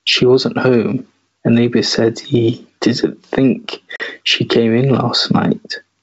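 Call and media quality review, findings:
Gain pumping, whole clip: swing of about 15 dB, loud and soft parts closer in level, dynamics squashed. Likely cause: mic gain set far too high, fast limiter or compressor clamping every peak.

Packet loss on ADPCM call, 3.96 to 4.01 s: hard-edged silent hole, 40 ms missing, fits two lost packets. G.722 64 kbit/s decoder's predictor and step size drift from sender's, so speech re-enters with brief slight distortion.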